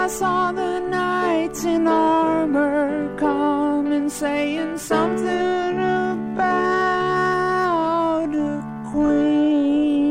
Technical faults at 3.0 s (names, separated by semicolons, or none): none